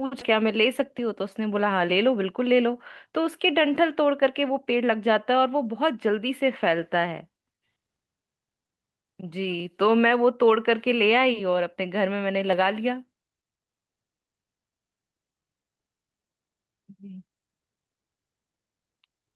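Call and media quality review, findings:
Nothing stood out on a full listen to the speech recording, and no findings are logged against it.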